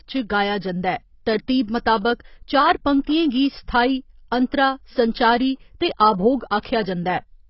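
Speech that sounds dull and muffled throughout, with nothing above about 5.6 kHz and a smeared, warbling texture on sustained sounds and sibilants. That points to heavy AAC compression, likely AAC-LC at a very low bitrate, roughly 16 kbps, where the encoder drops high frequencies and quantises the rest coarsely. Just after "संचारी ते आभोग", from 6.60 to 6.65 s, a short hiss runs ahead of a sharp onset for about 46 ms, which softens the attack. This is pre-echo: the codec spreads noise sized for the loud attack across the whole transform block, including the quiet moment before it.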